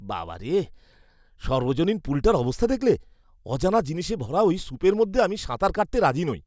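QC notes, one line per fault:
No faults to note for QC.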